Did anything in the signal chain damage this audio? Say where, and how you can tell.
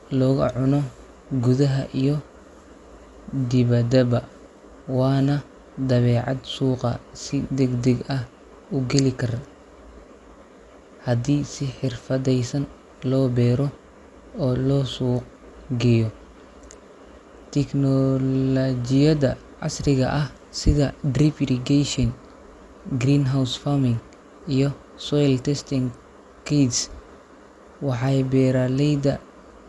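Yes, at the codec. The speech is dull throughout, with nothing above 11.4 kHz and rough, fluttering noise. Likely Dolby Digital compression, starving bands of bits.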